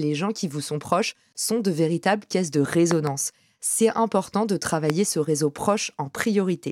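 A likely voltage spike, such as a plug, switch or static discharge, entered this speech recording, causing loud pops: a double pop from 2.91 to 3.09 s, roughly 15 dB above the signal, and a single louder one at 4.90 to 4.92 s, about 20 dB above. Speech continues underneath.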